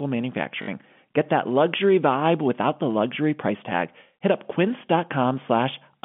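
At 0.62 s a short robotic stutter breaks into the speech, lasting about 60 ms until 0.68 s. This is packet loss with the last packet repeated. Audio stopped arriving, and the receiver kept replaying the final good chunk until fresh data returned. The span fits three lost 20 ms packets. Each replay restarts without regard to the pitch cycle, and the run buzzes at about 50 Hz. A plain dropout would give silence instead, and smoother concealment would fade rather than loop. All of this sits inside the telephone band of the G.711 line.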